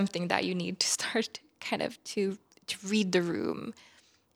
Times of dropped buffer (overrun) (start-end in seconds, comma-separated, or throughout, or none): 0.95, 3.32